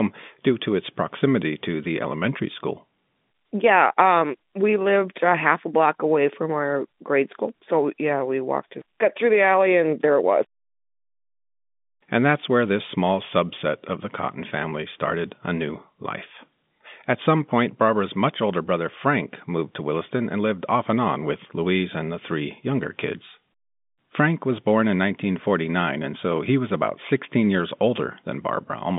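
No technical faults are audible.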